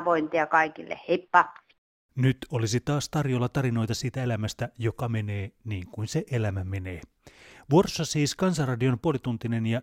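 No technical faults are audible at any point in the speech recording.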